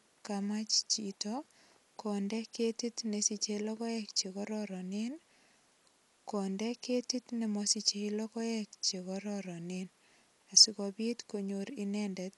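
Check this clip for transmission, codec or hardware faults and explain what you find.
One fault runs through the whole clip. Dolby Digital compression, present throughout, is the likely cause: the encoder narrows the band to nothing above 11.5 kHz and gives many frequency lines no mantissa bits, which the decoder fills with noise. The speech sounds dull, with rough fluttering around tones, which fits a bitrate near 64 kbps.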